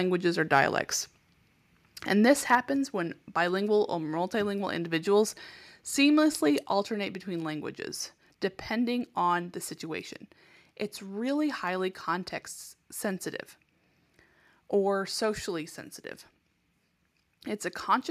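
A speech clip with a short overload and two sudden level drops. From 2.53 to 2.55 s, just before "when bilingual or multilingual", a peak shows microphone overload. It hits the converter ceiling by about 2 dB, and a small share of samples are flattened. This gives a brief harsh crackle, likely from input volume set too high. At 2.55 s, right after that peak, the microphone volume steps down by about 3 dB. Voice and background drop together at once. At 6.63 s, between "or multilingual individuals seamlessly" and "alternate between languages depending", it steps down another 3 dB. Both drops likely come from call software cutting the device's input gain after detecting a loud or clipped signal.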